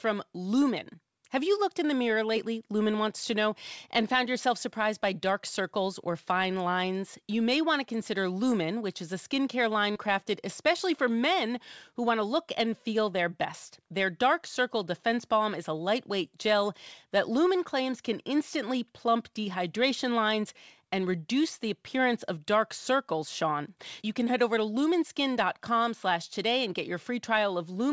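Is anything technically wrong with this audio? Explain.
Yes. Between 9.92 and 9.98 s there is a short concealed packet loss. About 40 ms of the call arrived too late for the decoder, so the receiver invented roughly 33 ms to cover the gap, extending the preceding sound from its pitch or as shaped noise, then crossfading back into the real audio. It is heard as a brief smear or wobble in the speech. On a spectrogram, that stretch shows smoothed, repetitive harmonics or diffuse noise instead of natural detail. The waveform shows a copied-looking cycle pattern merging back. The call path itself has nothing above 8 kHz, consistent with G.722.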